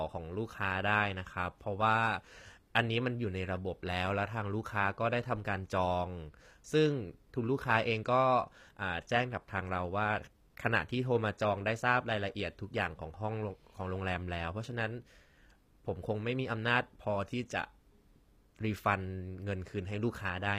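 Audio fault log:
Throughout: HE-AAC compression. Nothing above 15.5 kHz. S sounds turn gritty and metallic. The treble is likely rebuilt from copied lower bands, which fits about 24 kbps.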